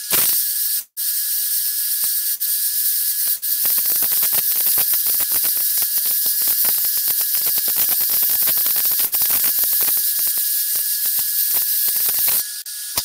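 Integer overflow runs through the whole clip. The signal is driven about 9 dB too hot, and a small fraction of the loudest peaks pass the integer ceiling. Those samples are not held at the limit. They wrap to the opposite extreme instead. Each one jumps across the full range. The result is harsh, violent cracks on loud moments. They are far sharper and uglier than ordinary clipping.

From 0.79 to 0.99 s the audio breaks off. The last sound is carried on as a fading buzz and hiss. Then there is a short stretch of near silence, about 80 ms. The sound returns further along, with roughly 180 ms gone. This is likely a long network dropout. The receiver had nothing to play and concealed the gap as best it could before giving up.

A burst of packet loss follows at 2.34 to 2.43 s. Two more come at 3.36 to 3.45 s and 9.06 to 9.15 s. Each removes about 60 ms of audio. Packets never arrived or came too late to play. 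The receiver extends the last sound and lets it fade across the gap. Each one is heard as a brief held buzz or hiss. Then the audio jumps ahead, with the middle missing.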